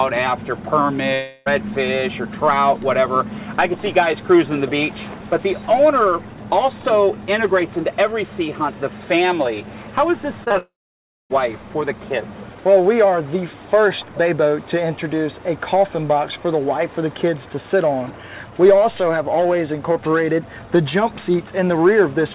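From 1.14 to 1.48 s, about 0.32 s of audio goes missing, likely from a long network dropout. The receiver fills the whole gap by stretching the last sound into a fading buzz or hiss. On a spectrogram this shows as smeared, repetitive bands with no fresh detail, and the waveform never drops to silence.

Between 10.44 and 10.56 s, three short concealed packet losses of about 20 ms each run back to back. The decoder patches each hole by continuing the preceding sound, which produces a brief wobbly smear. The spectrogram shows slightly blurred, repeated texture across that stretch.

Right after, from 10.58 to 11.32 s, a likely long network dropout removes about 0.72 s. Concealment carries the last sound only briefly before it fades, and roughly 0.59 s of flat silence follows, visible as a clear gap in the waveform. The audio then resumes without the lost part. Throughout the clip, energy stops at 4 kHz, which points to a narrowband telephone codec such as G.711.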